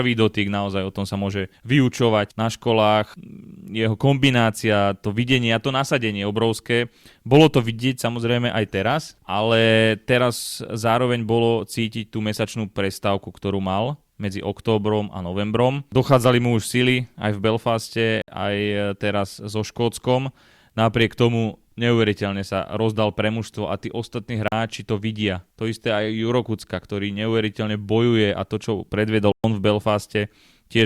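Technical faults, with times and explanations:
18.22–18.28 s, 24.48–24.52 s, 29.32–29.44 s: block of digital silence. The speech drops into short holes of 63, 40 and 120 ms, before "aj teraz so", between "mužstvo a tí ostatní" and "to vidia", and after "a to čo predvedol". Samples were zeroed with no fade, likely because the output buffer went unfilled.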